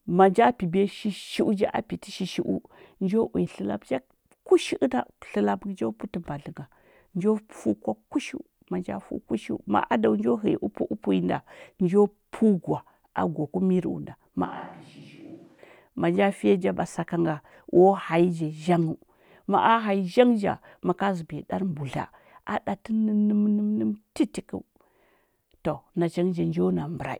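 Speech, with a switch to a distant microphone from 14.45 to 15.58 s, likely because the close mic dropped out. The sound turns hollow and roomy and drops about 10 dB. The waveform shrinks abruptly, and the spectrogram loses bass and shows a raised noise floor.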